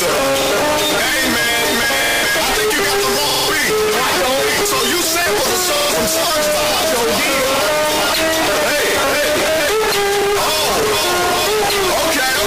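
Repeated buffer stutters occur at 0.42, 2.04, 3.30, 5.76, 7.57, 8.87 and 10.22 s. New audio arrived late, so playback looped the last 46 ms chunk, which fits a 2048-sample buffer. Each repeats one to four extra times with hard joins. This produces brief stutters.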